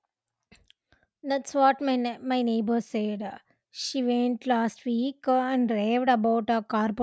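No technical faults can be heard anywhere in the recording.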